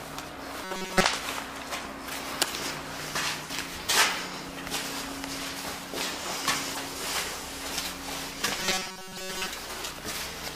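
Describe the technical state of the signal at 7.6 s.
At 7.6 s the signal is intact, with no audible dropout, distortion, glitch or other technical fault at that point.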